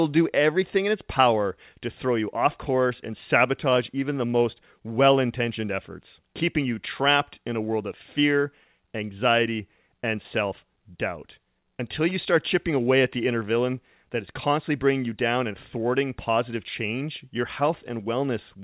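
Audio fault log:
The speech arrives through a call path with nothing above 4 kHz, consistent with a G.711 A-law narrowband codec, and no fault is audible in the signal.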